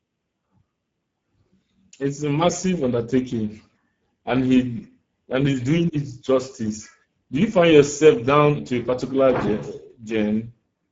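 Throughout, Speex codec damage leaves the speech hoarse and noisy, with a low bitrate near 10 kbps. A spectrogram shows smeared harmonics and an empty band above 7.7 kHz.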